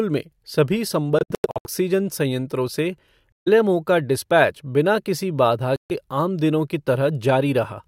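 A speech clip with three Bluetooth dropouts, likely from packets missing their deadline: 1.19–1.66 s after "में सभी" (broken gaps, longest about 93 ms), 3.32–3.48 s before "एलएमओ का डिस्पैच बिना", and 5.76–5.92 s before "आम दिनों की". Each shows as flat-line holes in the waveform and blank columns on the spectrogram, with speech resuming as if it had continued.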